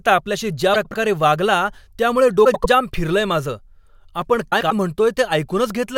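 Frames out of order at 0.74–0.95 s after "आपल्याशी ज्या", at 2.44–2.66 s before "जाम फिरलंय माझं", and at 4.52–4.72 s. In each, two adjacent blocks of about 96 ms swap places, so the speech flutters garbled, with no time lost.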